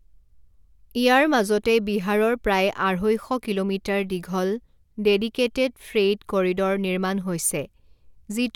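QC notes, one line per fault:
No faults detected on this speech clip.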